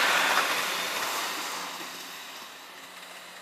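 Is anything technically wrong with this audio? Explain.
Yes. Throughout the clip the audio is read two samples at a time, so it plays at double speed. The reader treats each pair of samples as one frame, which halves the timeline and raises pitch by 12 semitones, a full octave. A spectrogram shows everything shifted upward with harmonic spacing doubled, while the waveform looks squeezed horizontally.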